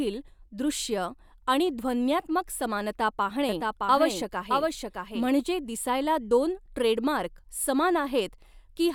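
From 3.49 to 5.27 s, the speech is likely captured twice over a slower second path, producing a doubled audio track. A full-band copy trails the original by roughly 0.7 s at around 5 dB lower, dry and uncoloured, cutting in and out abruptly.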